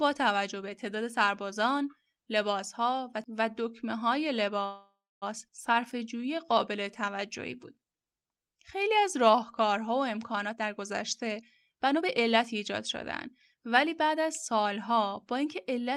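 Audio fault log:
4.65 to 5.24 s, call audio freeze: the sound stops and a fading buzz fills about 0.56 s, the last 0.29 s of it silent, likely because packets stalled and the jitter buffer ran dry. Nothing is lost, since playback resumes where it halted. A spectrogram shows a smeared, decaying band ending in a blank column.
5.48 s, skip ahead: roughly 0.3 s of audio is dropped and the two sides are spliced with only a 9 ms bridge, so the sound lurches forward. The waveform shows an abrupt joint between mismatched envelopes, and the spectrogram shows a hard vertical discontinuity.
5.75 to 9.73 s, jitter buffer slow-down: repeated pitch periods add 0.32 s, running the speech at 92% speed with unchanged pitch, so sounds drag. On a spectrogram the harmonics stay level while syllables stretch wider, with faint periodic repetition in the waveform.
10.46 to 12.78 s and 13.26 to 15.79 s, jitter buffer speed-up: short pitch-period slices are cut out, roughly 0.4 s at 116% speed and then about 0.2 s at 107%, to shrink excess buffering, so speech sounds hurried at the same pitch. 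Spectrograms show compressed syllables with steady harmonic spacing.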